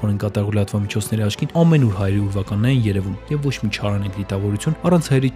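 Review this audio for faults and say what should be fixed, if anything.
No faults can be heard anywhere in the recording, so nothing needs fixing. There is nothing to correct or prevent.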